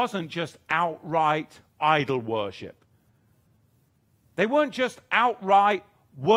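A speech recording with nothing technically wrong with it.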